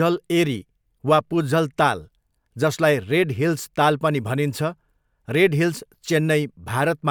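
No technical faults can be heard anywhere in this speech recording; the signal holds steady throughout.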